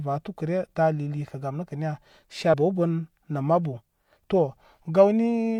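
At 2.50 s, just after "gam nəkə niya", compressed frames are skipped. About two frames never reach the output, so the speech jumps ahead by roughly a tenth of a second. The jump fits frames of about 43 ms.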